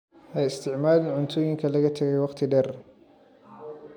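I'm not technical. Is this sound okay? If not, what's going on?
Yes, this recording sounds fine, with nothing going wrong that a listener would notice. The speech comes through steadily, with no dropouts, jumps or odd noises along the way.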